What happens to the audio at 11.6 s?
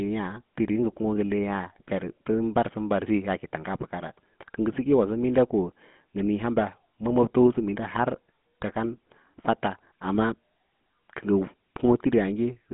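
At 11.6 s the speech is still passing through the GSM full-rate codec that affects the whole clip. It rebuilds the voice from a vocal-tract model fed by coarse regular pulses, fitting a 13 kbps link, leaving a plainly buzzy, gravelly tone confined to roughly 150 Hz to 3.5 kHz.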